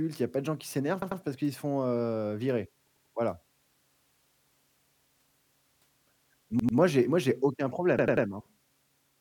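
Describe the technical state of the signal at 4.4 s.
At 4.4 s the speech signal is intact, with no audible technical fault at that moment.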